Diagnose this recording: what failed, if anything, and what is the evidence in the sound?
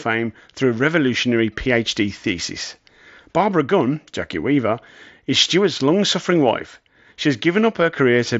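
Nothing in the recording points to a failure at any stage. The speech comes through a Bluetooth mSBC headset link working as expected, with a top end stopping around 8 kHz and only a light grainy texture from the codec.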